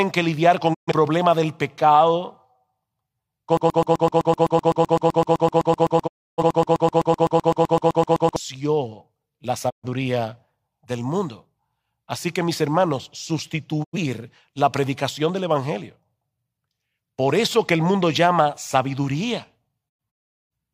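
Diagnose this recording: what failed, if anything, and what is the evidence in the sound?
Digital broadcast dropout, at the reception and codec stage. The audio fades to silence in about 20 ms and returns at 0.73–0.92 s, 6.06–6.43 s, 9.69–9.88 s and 13.83–13.97 s. A final burst of holes runs from 19.88 to 20.52 s, and its longest gap is 384 ms. The gap lengths (128, 299, 128, 85 and 469 ms in total) are multiples of about 43 ms, which fits whole codec frames failing their checks. The receiver mutes until valid frames return, and the material in each gap is gone.

Broken-record loop, in the playback and buffer stage. From 3.57 to 8.36 s, a 127 ms fragment repeats exactly, back to back, about 38 times. The 6.06 s dropout falls inside it. The likely cause is a stalled stream or player that kept re-sending the last block in its buffer. The audio that should have played during those 4.8 seconds is lost.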